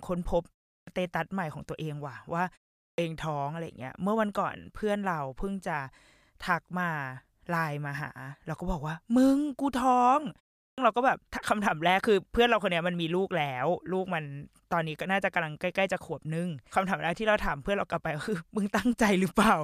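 Clipped start after a pause occurs at 0.77 s, 2.86 s and 10.67 s, each time after a short gap of roughly a third of a second. The output device drops into a low-power state during the silence and needs time to wake, so roughly 100 to 120 ms of the following speech is lost. Each phrase lurches in abruptly without its opening sounds.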